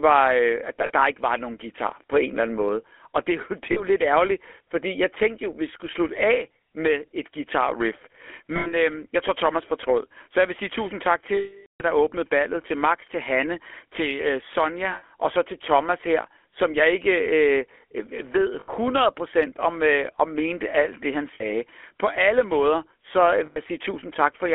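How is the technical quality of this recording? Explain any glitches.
The recording has clear telephone-codec damage throughout, plus eight short dropouts.

GSM full-rate codec, throughout: The speech passed through the original GSM coder, which models the vocal tract and drives it with a sparse pulse train. Its roughness fits the 13 kbps full-rate codec. The sound is confined to roughly 300 Hz to 3.4 kHz and has a plainly audible buzzy, gravelly texture.

Lost GSM frames, at 0.86, 3.72, 8.56, 11.34, 14.92, 18.6, 21.34 and 23.46 s: Missing frames were filled by repeating the last good frame. Each gap is heard as a brief rough, metallic ring, most lasting 40 to 100 ms. The longest gap is 460 ms at 11.34 s, between "vil sige tusind tak" and "der åbnede ballet til", and it is cut to silence before the speech resumes.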